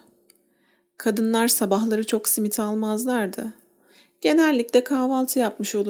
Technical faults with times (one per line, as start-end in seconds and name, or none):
none